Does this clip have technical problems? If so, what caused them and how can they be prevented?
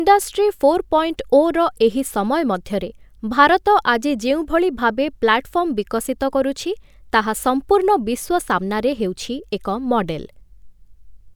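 No, the speech signal shows no technical faults at any point, so there is nothing that needs preventing.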